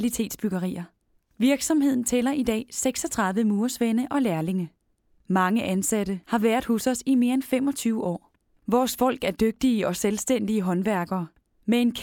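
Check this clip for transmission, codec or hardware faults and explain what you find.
No faults were found.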